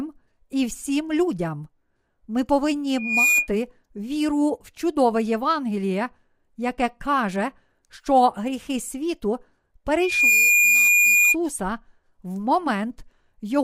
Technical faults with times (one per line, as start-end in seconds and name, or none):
2.98-3.48 loudspeaker feedback squeal
10.01-11.36 loudspeaker feedback squeal